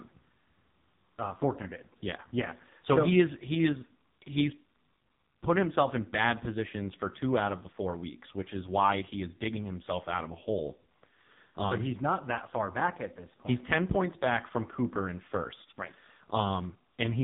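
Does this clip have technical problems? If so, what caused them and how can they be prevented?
Yes. Throughout the speech the voice sounds thin, buzzy and synthetic, with nothing above 3.8 kHz. This is heavy AMR narrowband mobile codec damage: an 8 kHz vocal-tract model starved of bits, which fits one of AMR-NB's lowest modes, around 5 kbps. To prevent it, record or transmit with a wideband codec at a higher bitrate.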